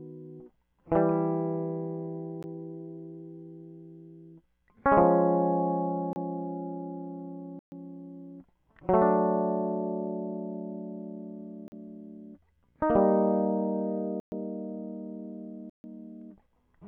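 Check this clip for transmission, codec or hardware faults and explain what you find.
The music drops out six times with blocks of digital silence, where a run of output samples is replaced by zeros and the sound cuts off and returns with no fade.

At 2.43 s, a 14 ms block of zeros is heard as a tick.

From 6.13 to 6.16 s, a 29 ms block produces a pop.

From 7.59 to 7.72 s, a 129 ms block leaves an audible hole.

From 11.68 to 11.72 s, a 40 ms gap is heard as a short pop.

From 14.2 to 14.32 s, a 120 ms block gives a dropout.

From 15.70 to 15.84 s, a 144 ms block produces the longest hole.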